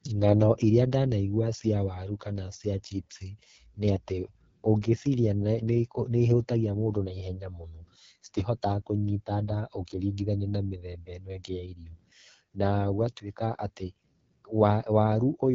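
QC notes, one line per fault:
throughout, AMR wideband (HD Voice) codec: the speech sounds plainly rough and raspy, which points to one of the codec's two lowest rates, around 8.85 kbit/s. Below 6.4 kHz the sound is rebuilt from a pulse-excited vocal tract model, which coarsens the voice. The band above that is filled with shaped noise. On a spectrogram, harmonics look smeared, the top band is diffuse noise, and nothing appears above 7.5 kHz.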